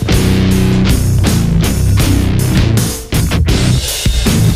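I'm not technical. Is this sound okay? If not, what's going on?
Yes, this sound is okay. I didn't hear anything wrong with it at any point.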